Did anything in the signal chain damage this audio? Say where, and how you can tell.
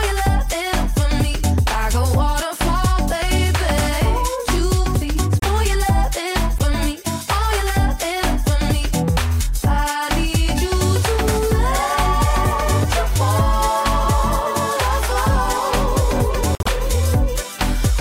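Yes. The damage happened at the codec stage, where corrupt frames were decoded and played instead of being concealed. Short bursts of misplaced energy appear at 5.40–5.44 s, 6.58–6.61 s, and 16.55–16.68 s, reaching about -5 dBFS. The first two are brief, and the last is longer, which suggests several consecutive damaged frames. Flipped bits gave the decoder wrong gains and codes, so it rebuilt sound at the wrong frequencies for the length of each bad frame.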